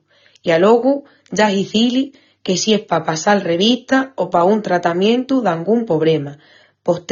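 Throughout the speech, the signal has likely passed through AAC compression at a low bitrate, which fits roughly 24 kbps AAC-LC. With so few bits per frame, the encoder drops everything above 7 kHz and quantises the remaining bands coarsely. The audio therefore sounds dull and lacks air, with sibilants thinned and fizzy and sustained sounds carrying an audible warbling, smeared texture from start to finish.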